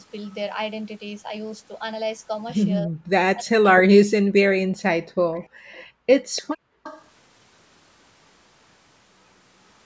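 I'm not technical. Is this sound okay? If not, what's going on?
No. From 2.83 to 3.13 s, and again from 3.33 to 5.14 s, the speech drops away almost to nothing in pieces. This is speech suppressed in double talk: both sides likely spoke at once, and the call's echo canceller turned this talker down along with the loudspeaker sound.

Faint, delayed repeats of the speech appear at about 5.35, 5.72 and 6.36 s, and from 6.83 to 7.04 s. They trail the original by about 0.3 seconds. This is echo leak: the far end's echo canceller likely missed some of its loudspeaker sound, which went back down the line.

From 5.49 to 6.07 s and from 6.56 to 6.83 s, the quiet room sound behind the speech briefly goes nearly silent, then returns. This is background gated by the echo canceller, which clamped the microphone hard while the loudspeaker was playing.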